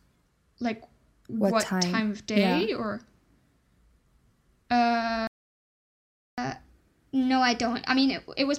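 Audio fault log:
5.27–6.38 s, playback stall: The player likely ran short of buffered data or had its output thread blocked, so nothing reached the output for about 1.1 s. The speech cuts off mid-flow into silence, then resumes once the player recovers.
6.38–8.58 s, catch-up at higher speed: To win back the lost time, the player resamples its backlog and runs it at 1.1 times normal speed until the end of the clip. The speech sounds hurried and sits roughly one and a half semitones higher.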